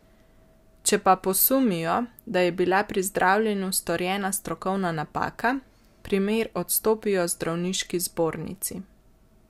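No technical faults are audible.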